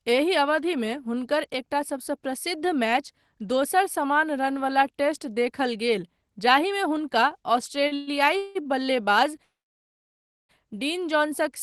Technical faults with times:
7.87-8.67 repeated stalls (stutter)
9.43-10.51 call audio freeze

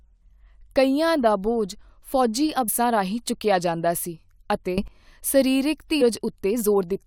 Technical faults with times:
2.67 damaged data in a compressed stream
4.78-4.88 sudden gain jump
6.00 damaged data in a compressed stream

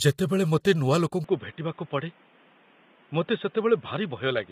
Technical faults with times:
0.00-4.52 low-delay AAC compression
1.24-4.52 input switched to a poorer device

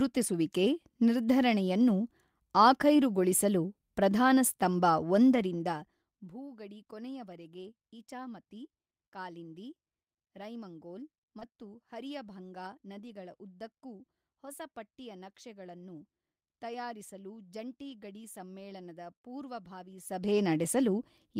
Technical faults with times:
8.25 lost packet rebuilt from error correction
11.39-11.43 short concealed packet loss
11.41 lost packet rebuilt from error correction
13.07 lost packet rebuilt from error correction
17.89 lost packet rebuilt from error correction

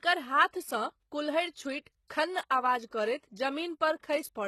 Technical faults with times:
0.00-4.48 HE-AAC compression

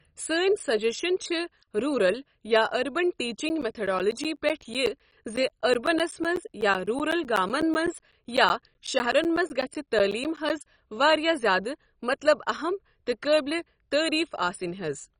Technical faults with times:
0.00-15.19 MP2 compression
3.37-10.50 periodic USB or driver dropouts

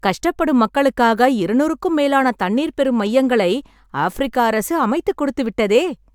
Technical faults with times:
none

